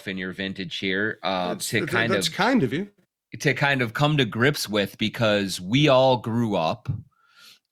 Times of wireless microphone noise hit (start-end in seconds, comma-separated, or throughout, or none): 4.60-4.65